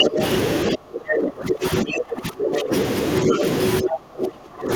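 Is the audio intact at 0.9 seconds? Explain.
No. At 0.9 seconds the speech sits inside a stretch of speech suppressed in double talk, running from 0.74 to 2.72 s. The level sinks, at worst around 25 dB, likely because an echo canceller mistook this side's talk, overlapping the far end's sound, for echo. The waveform's envelope collapses, and the spectrogram shows thinned, patchy energy.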